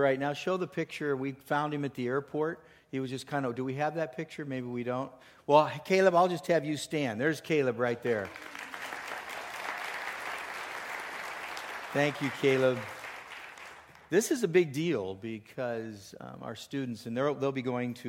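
No technical faults can be heard anywhere in the clip.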